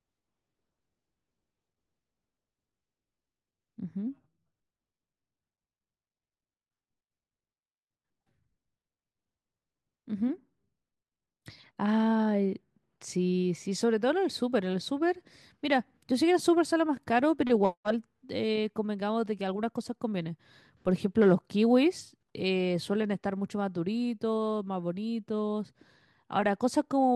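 No technical faults can be heard anywhere in the recording.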